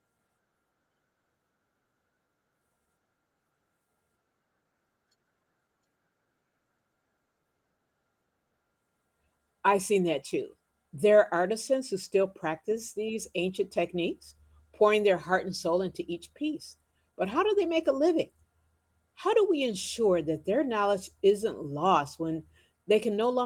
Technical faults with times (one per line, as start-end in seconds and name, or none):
none